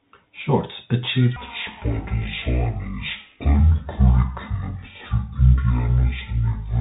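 A speech clip carried over a Bluetooth headset link using the CVSD codec. CVSD codes each sample as a single up-or-down bit and adapts its step size, which fits a 64 kbps stream. Nothing above about 3.8 kHz survives, so the speech is narrow and boxy. Where loud high-frequency energy outruns the step, the sound distorts, sibilants turn scratchy, and a granular hiss runs underneath throughout. From 1.36 s to the end, the audio is played at the wrong speed, at 0.525 times the original rate. This likely comes from a player or editor running the section against the wrong clock. Because speed and pitch move together, the speech abruptly drops by roughly ten semitones at that point and drags along at about half pace, sounding deep and sluggish until the clip ends.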